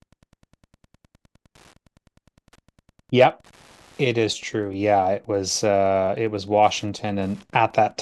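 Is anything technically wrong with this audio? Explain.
Yes. Wi-Fi interference runs through the whole clip: a nearby Wi-Fi radio's beacon bursts, every 102.4 ms, are picked up and rectified by the audio circuit, producing a steady ticking about ten times a second, roughly 35 dB below the speech.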